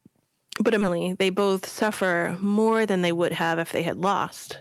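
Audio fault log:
Throughout: hard clipping. The speech is driven about 8 dB past what a stage can pass, so the loudest peaks, around one percent of the signal, are sheared flat. That adds high harmonics heard as crackle on peaks rather than a steady fuzz or noise floor.
0.81–0.83 s: skip ahead. Around 0.4 s of speech is simply gone, and the sides are butted together with no silence or fill. That sets it apart from a dropout, which leaves a hole, and from concealment, which smears sound across the gap.
0.91–2.12 s: jitter buffer speed-up. To shed built-up delay, the receiver cuts small pitch-period pieces many times over, trimming roughly 70 ms and running speech at 105% speed. Pitch stays put, unlike a resampling or clock error, so the talk just sounds slightly hurried.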